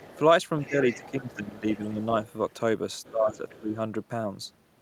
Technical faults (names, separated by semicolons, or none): other side's voice leaking through; speech suppressed in double talk